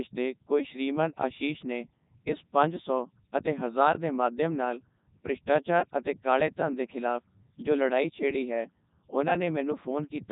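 Robotic, buzzy speech with nothing above about 3.8 kHz throughout: a Codec 2 vocoder rebuilds the voice from sine waves at 3.2 kbit/s, discarding the original waveform entirely.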